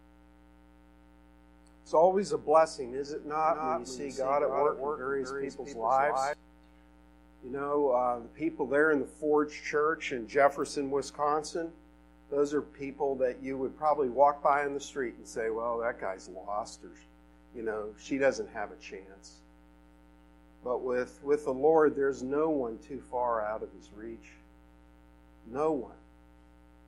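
From 3.43 to 6.33 s a second, somewhat quieter copy trails about a fifth of a second behind, dry and abruptly switched: a doubled audio track, likely from a delayed duplicate path.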